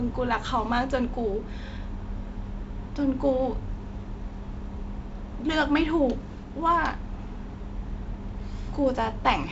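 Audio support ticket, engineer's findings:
Nothing wrong turned up on this speech clip: it sounds like ordinary G.722 wideband telephone coding, with content reaching up to about 7.7 kHz and only the light hiss and slight graininess that codec leaves, which fits one of its lower-bitrate modes.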